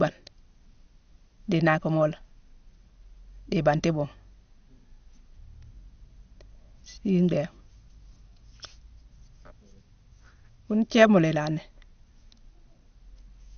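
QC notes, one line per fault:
Throughout, MP2 compression: the speech sounds dull, with nothing above about 6.5 kHz, and carries a plainly audible gurgling, granular distortion. The likely cause is MPEG Layer II coding at a low rate, near 48 kbps. Upper sub-bands are switched off for lack of bits. Remaining bands are coarsely quantised and flicker.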